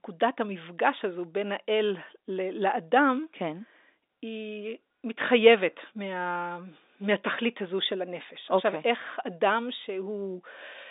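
Nothing is technically wrong with this speech recording, which is carried over a telephone line band of about 250 Hz to 3.7 kHz.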